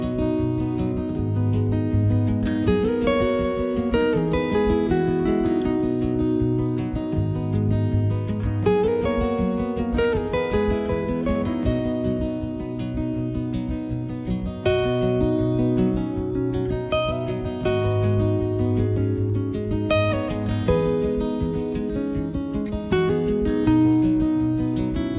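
No technical faults are audible anywhere in this audio.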